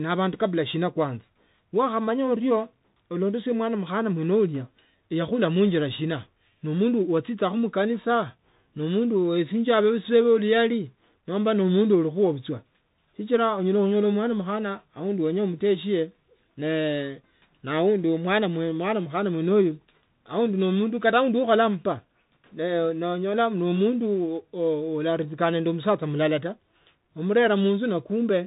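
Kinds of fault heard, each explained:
Bluetooth CVSD headset codec: the speech has been squeezed through the old narrowband headset link, where each sample is a single up-or-down bit and the step size keeps adapting. Nothing gets through above 4 kHz, so the whole clip sounds boxed-in and phone-like. The damage is plainly audible: s sounds come out scratchy, louder bright bits smear and distort when the step can't keep up, and there's a grainy hiss underneath, which fits a 64 kbps stream.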